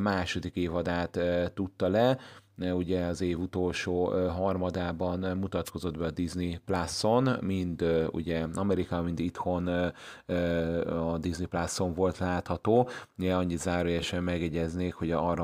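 A brief swish of static at 5.65 to 5.71 s, after "az év utolsó harmadában", is a wireless microphone noise hit: the FM radio link faded as reflections cancelled, letting receiver noise through.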